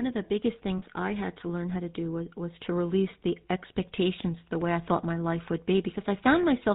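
Speech runs through the GSM full-rate codec, band-limited below 4 kHz with a buzzy, gravelly roughness rather than a plain muffling low-pass, which fits 13 kbps coding. Lost GSM frames at 0.78–0.83 s, between "of the biggest" and "I had to learn", leave a 40 ms metallic held ring, which fits two lost frames, instead of a silent dropout.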